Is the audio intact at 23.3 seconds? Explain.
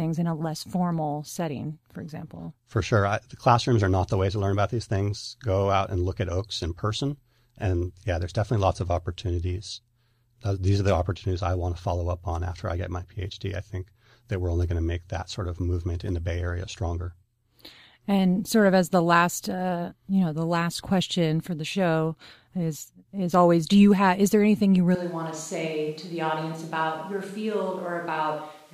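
Yes, the speech at 23.3 seconds plays through intact, with no dropout, click or other fault at that moment.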